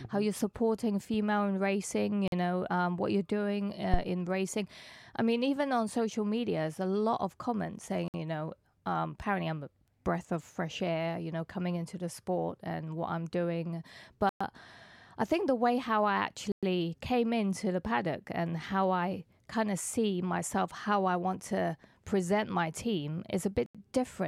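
Speech, carrying two kinds of fault. Short drops to silence at 2.28 s after "supporting female in racing", 8.08 s after "a lot of comments", and at 14.29, 16.52 and 23.66 s, lasting 45 to 113 ms, are likely a Bluetooth stall. The sound resumes rather than skipping ahead as an edit would. At 3.94 s, just before "in racing I mean", a phantom power thump gives a deep thud decaying in about 23 ms, a supply step through the input rather than a handling knock.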